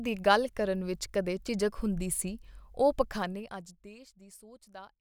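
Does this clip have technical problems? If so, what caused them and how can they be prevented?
Yes. Zipper noise runs from 3.01 to 4.03 s as the level drops by roughly 20 dB in 2 dB steps, about fifteen a second, each step ticking audibly, unlike a smooth fade. Smoothing the gain per sample, with a ramp across each buffer, prevents it.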